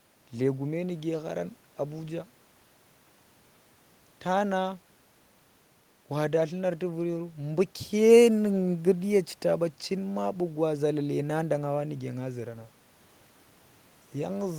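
A speech recording, and nothing is technically wrong with it.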